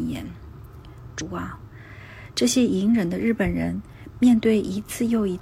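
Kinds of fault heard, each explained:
Compressed frames skipped: at 1.16 s the decoder drops what sounds like a single frame of roughly 50 ms, consistent with a frame length near 46 ms, so the audio jumps forward.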